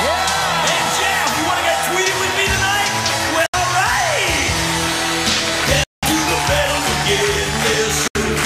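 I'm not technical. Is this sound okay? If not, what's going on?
No. The sound cuts out briefly at 3.46, 5.84 and 8.08 seconds, then carries on as if it had kept playing. This is a Bluetooth dropout, likely from audio packets reaching the headphones too late.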